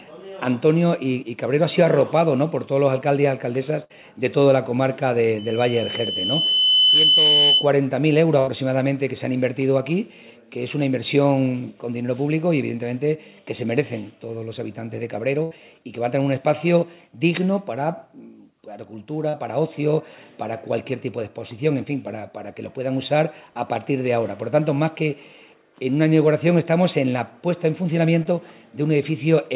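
At 3.84 to 3.92 s there is a burst of packet loss. Several packets in a row failed to arrive in time. The receiver stretched the last sound and faded it, so a held buzz or hiss replaces about 60 ms of missing audio, then playback jumps ahead.

From 5.38 to 7.71 s a loudspeaker feedback squeal appears. The microphone is hearing its own loudspeaker, and the loop gain passes one at 3 kHz. A single tone swells over about a second and a half, ending a few dB above the signal. It sits just under the call path's 4 kHz ceiling, which fits a G.711 line.

Two more bursts of packet loss follow, at 8.40 to 8.49 s and 15.43 to 15.53 s. Each drops about 80 ms. Each is heard as the same fading smear followed by a skip forward.

Short concealed packet loss occurs at 19.29 to 19.35 s and 28.23 to 28.27 s. These gaps are briefer, about 40 ms and 20 ms. The receiver patched them from the preceding sound. 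They come through as a quick wobble or smear, and a short sound can vanish.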